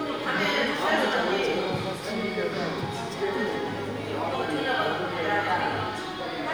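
Nothing here trips up at any point, so there's no technical fault to point to in this bit of everyday sound.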